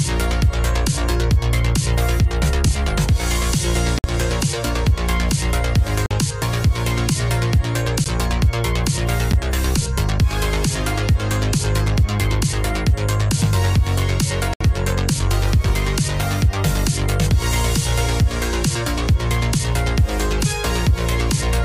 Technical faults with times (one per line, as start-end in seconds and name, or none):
3.99-4.04 block of digital silence
6.06-6.11 block of digital silence
8.04 block of digital silence
9.32 block of digital silence
14.54-14.61 block of digital silence